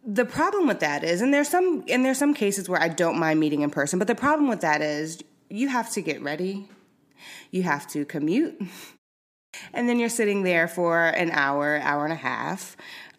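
At 9.4 s, after a half-second pause, the playback device has powered down in the silence and needs time to wake and lock again. That produces a clipped start after a pause: roughly the first 137 ms of sound, through 9.54 s, never reaches the output. Speech resumes abruptly out of silence with its onset sliced away, so "and then you're sitting" begins already in progress, missing its opening sounds.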